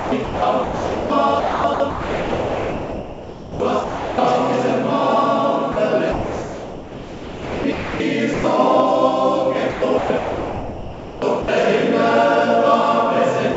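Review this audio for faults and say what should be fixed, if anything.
Sound chopped by the voice detector at 0.0–1.1 s, 1.4–4.18 s, 6.12–8.0 s and 9.7–11.48 s. Within these stretches, roughly 0.76 s, 2.34 s, 1.8 s and 1.34 s of sound respectively give way to synthetic comfort noise. The likely cause is a sender voice detector toggling transmission on and off. Lowering the detector's threshold and lengthening its hangover time would prevent it.

Sound dropped by the voice detector at 5.72 s (40 ms), 8.34–8.44 s (100 ms) and 13.54 s (28 ms, at the very end). Each short piece of sound is replaced by steady comfort noise, likely because the detector misread it as background and stopped sending. Adding onset and release padding to the detector would keep these edges intact.

The 7 kHz bandwidth ceiling heard throughout fits a G.722 call codec.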